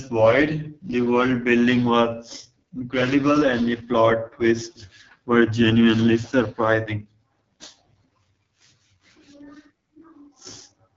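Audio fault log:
Throughout: AMR wideband (HD Voice) codec, with heavy damage. The speech has the rough, raspy texture of this codec at its lowest rate, which fits 6.6 kbit/s. The codec models speech up to 6.4 kHz as pulses driving a vocal tract filter, and at so few bits per frame that model is too coarse to follow the voice closely. The band from 6.4 to 7 kHz is filled with shaped noise, and nothing is present above 7.5 kHz.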